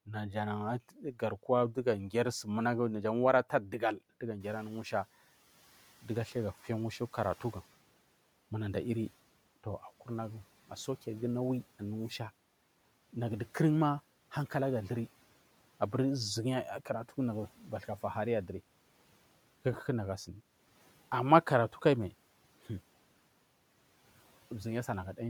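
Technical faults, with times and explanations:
0.89–1.45 s and 3.50–3.82 s, speech cut by the noise suppressor: parts of the speech turn faint and swallowed, by up to about 13 dB in the first stretch and about 8 dB in the second. The suppressor mistook these quieter parts for background noise and turned them down.
4.40–5.08 s, noise suppressor catching up: when the room noise jumps by about 13 dB, it first comes through with less reduction, then sinks by about 9 dB over 680 ms as the suppressor's noise estimate adjusts to the new, louder background.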